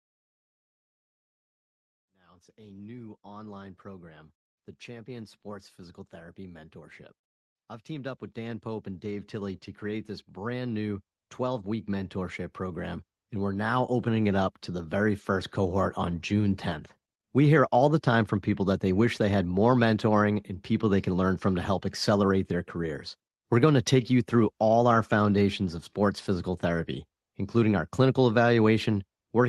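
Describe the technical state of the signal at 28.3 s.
At 28.3 s the speech is intact, carrying only the ordinary coding character of the Opus call path it travelled through, with nothing audible that amounts to a fault.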